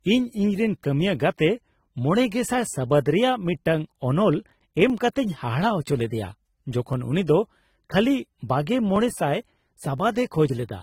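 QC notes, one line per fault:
Throughout: transcoding between lossy codecs. Two layers of coding artefacts blend, nothing above 16.3 kHz, likely from an Opus stage followed by low-rate AAC-LC.
0.84–9.98 s: clock drift buffer slips. Regular clicks every 1.02 s, about ten in all, likely small blocks of a few dozen samples dropped or repeated as mismatched device clocks drift.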